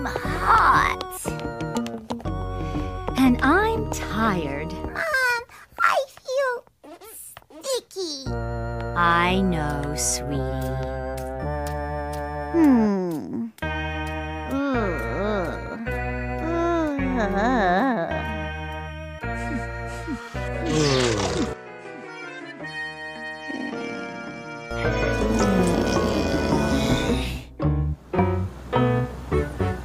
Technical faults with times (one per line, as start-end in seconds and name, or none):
21.53-24.71 input switched to a poorer device